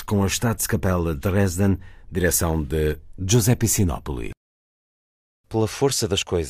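Nothing stood out on listening to this speech recording.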